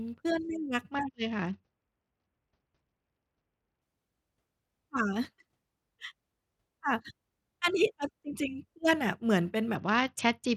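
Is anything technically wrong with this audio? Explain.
Yes. Two Bluetooth SBC bit pool drops occur, from 0.93 to 3.82 s and from 9.76 s to the end. Under link congestion the sender cut the SBC bit pool so audio kept flowing. The starved encoder gave the upper sub-bands almost nothing and quantised the rest coarsely. The speech loses its treble and turns dull, with a gritty noise layered on, which fits a fall from a bit pool near 28 to about 8, or roughly 72 kbps.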